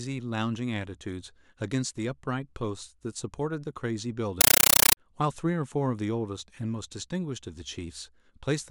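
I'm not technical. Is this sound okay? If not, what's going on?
No. From 4.41 to 4.97 seconds the speech is replaced by harsh, chattering static that buzzes about 31 times a second. This is a compressed stream played as audio: the player passed still-packed audio data, which fits a Dolby Digital stream, to the speakers as if it were ordinary sound, without unpacking it first. Each packet comes out as a burst of noise roughly 9 milliseconds long followed by silence, producing that rapid stutter.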